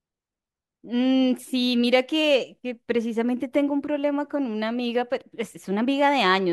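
Speech recording, no technical faults detected.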